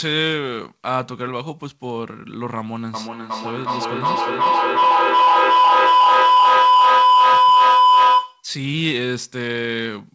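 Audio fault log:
2.94–8.53 s, feedback howl: a tone near 1 kHz builds to about 10 dB above the speech, pulsing roughly every 0.4 s. A microphone-to-loudspeaker loop returns each repeat louder, so the sound narrows onto the loop's favoured frequency until the loop breaks.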